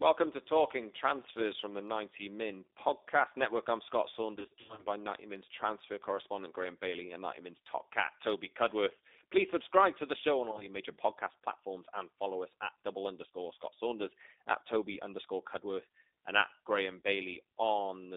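The whole thing's been through the G.729 codec, and you can hear it: the band is squeezed to about 300 Hz to 3.7 kHz, and the roughness and slightly synthetic edge fit an 8 kbit/s pulse-coded rebuild of the speech. That damage is plainly audible all the way through.

From 4.36 to 4.85 s there's VoIP packet loss concealed by the speech codec. About 290 ms went missing, scattered over half a second in runs of up to 40 ms. The decoder stretches the last sound into a buzzy tone or coloured noise that fades.

Around 10.52 to 10.66 s it happens again, between "to the show on" and "major podcast platforms and." This time only about 30 ms is lost, in 10 ms slivers over 80 ms.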